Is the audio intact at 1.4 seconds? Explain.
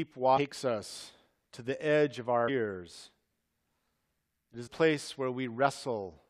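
Yes, at 1.4 seconds the speech is intact, with no dropout, click, distortion or other fault to be heard at that moment.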